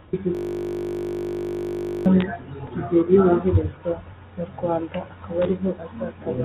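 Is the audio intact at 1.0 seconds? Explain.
No. At 1.0 s the audio is caught in a system hang loop running from 0.35 to 2.06 s. The system froze while the hardware kept replaying one 20 ms slice of its buffer, 86 times, so the sound becomes a steady buzz at 50 Hz. On a waveform the same 20 ms shape repeats exactly. On a spectrogram it appears as frozen horizontal lines spaced 50 Hz apart, held under the 4 kHz telephone-band ceiling.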